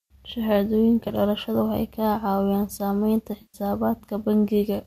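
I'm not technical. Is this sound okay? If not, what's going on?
No. Twice, pieces of the digital audio stream went missing in transit, which is AAC frame loss with concealment. When that happens, the decoder guesses at the missing sound by reusing what it last heard. From 1.0 to 1.1 s, a few very short gaps are scattered across about a tenth of a second, leaving a brief smeared, noisy patch in the speech. From 3.42 to 3.58 s, a longer gap of about 120 ms forces the decoder to stretch its guess further, so the speech briefly turns blurry and hollow before it recovers. The missing pieces were likely carried over low-delay AAC compression, the kind used on video calls.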